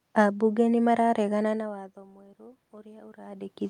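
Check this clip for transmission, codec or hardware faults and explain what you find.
One system fault is present: automatic gain rising. From 1.15 s to the end of the clip, the input level falls by about 23 dB, and the automatic gain control responds by gradually turning its gain back up. The speech and the room noise swell together over more than a second. That shared rise separates it from the talker moving, heard around 1.5 s and 3.0 s, where only the voice level shifts and the background stays steady.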